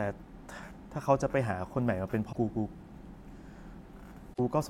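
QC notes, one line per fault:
2.29–2.36 s and 4.33–4.40 s: damaged data in a compressed stream. Corrupted frames are misdecoded while the decoder loses and regains sync, producing brief 70 ms glitches in the speech.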